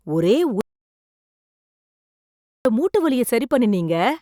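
A speech recording in which the sound cuts off abruptly at 0.61 s and goes to silence, with no room tone at all, until it returns mid-flow at 2.65 s. About 2.04 s of audio is simply missing. This is an audio dropout to silence: the input was likely lost, through a disconnected device, a failed link or a mute, while the recorder kept writing silence in its place.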